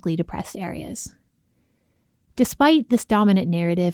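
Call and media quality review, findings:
No findings in this call and media quality review.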